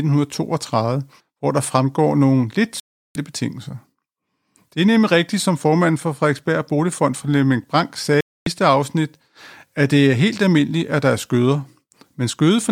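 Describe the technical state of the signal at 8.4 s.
At 8.4 s the signal is inside a digital broadcast dropout that runs from 8.21 to 8.47 s. The speech cuts to silence for about 0.26 s and then resumes later in the programme, with nothing from that gap recovered. The receiver stopped getting usable frames, either losing the digital signal or rejecting frames that failed their checksum, and muted its output until valid frames arrived again. A gap of this length fits roughly eight lost frames of about 32 ms each.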